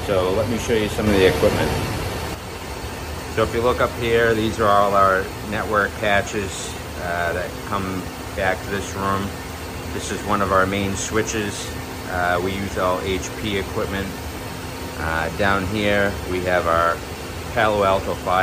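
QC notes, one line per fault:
1.07–2.35 s, sudden gain jump: level steps up about 5 dB with the noise floor, likely a digital gain change applied instantly without a ramp.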